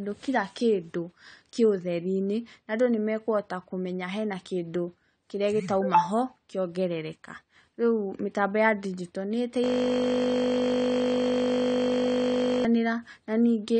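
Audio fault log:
Throughout: AAC compression, likely. Nothing is heard above 9 kHz, and the speech is dull and smeared, with a watery, fizzy edge on sibilants that fits low-bitrate AAC-LC near 32 kbps. Unlike simple low-pass filtering, the damage warbles and shifts from frame to frame.
9.64 to 12.65 s: system hang loop. A single 20 ms slice of audio repeats exactly, about 150 times, which turns into a steady 50 Hz buzz in place of speech. Its rigid, unchanging repetition sets it apart from a dropout or a stutter, because a frozen system left the hardware cycling one short buffer.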